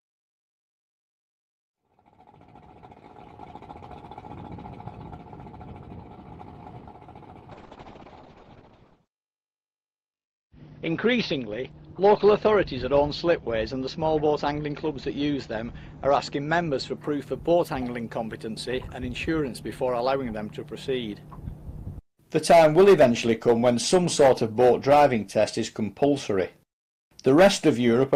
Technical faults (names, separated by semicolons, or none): call bitrate drop